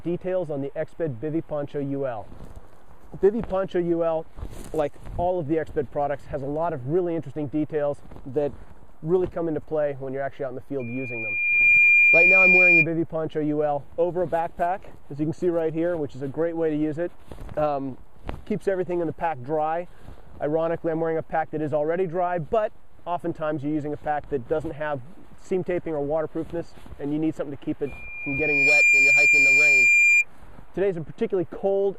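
Loudspeaker feedback squeal at 10.79–12.87 s and 27.86–30.25 s: mic–speaker loop gain passes unity at 2.4 kHz, swelling within a second to roughly 10 dB above the sound, a bright horizontal spectrogram line.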